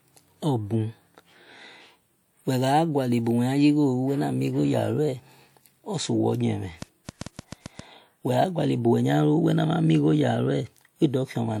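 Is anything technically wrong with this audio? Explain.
Yes. A train of clicks runs from 6.82 to 7.80 s in this speech clip. Something is injecting a short pulse into the signal about 7.2 times per second, likely electrical interference from nearby equipment or a faulty connection or power supply. Around seven clicks of much the same shape arrive at uneven spacing, each standing roughly 10 dB above the surrounding signal, so they come through as an irregular ticking or popping laid over the speech.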